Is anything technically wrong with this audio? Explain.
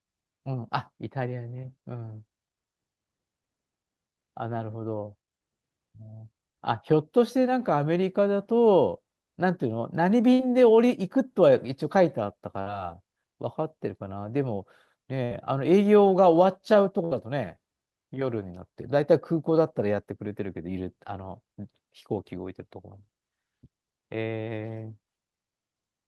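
Yes. The speech has four short dropouts from a burst of packet loss, at 10.33, 12.61, 15.24 and 17.05 s. Each time, roughly 60 ms of audio never arrived. The receiver fills the gap for 50 to 65 ms by extending the last sound and fading it, giving a brief held buzz or dying hiss before speech jumps ahead. On a spectrogram, each gap shows smeared, flattened harmonics that fade out and then an abrupt restart. The waveform shows a repetitive, decaying stretch at each point. The call codec's band limit near 12 kHz is also visible.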